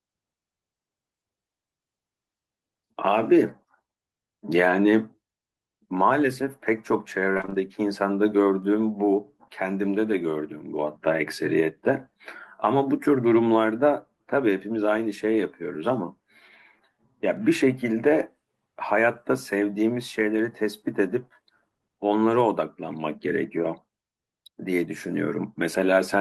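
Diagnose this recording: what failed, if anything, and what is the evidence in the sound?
The network path failed with repeated packet loss (robotic sound) from 7.33 to 7.58 s. Six gaps, none longer than 25 ms, were patched by extending the preceding sound, so about half the span is concealed. It sounds choppy, and the spectrogram shows smeared, repeated frames.

Two sharp single clicks at 8.63 s and 17.37 s are likely dropped samples at the driver or buffer stage, each losing only a fraction of a millisecond. The waveform steps abruptly, and each click appears as a thin vertical line across the spectrum.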